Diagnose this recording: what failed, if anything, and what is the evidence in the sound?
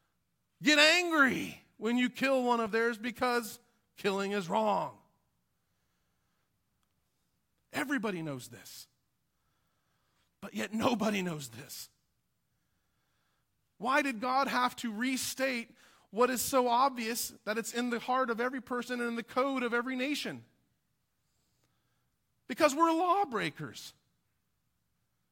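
Nothing failed in this speech recording, and there is no fault in the sound to point to. Every stage from capture through to playback does its job, with nothing to trace back to a broken link in the chain.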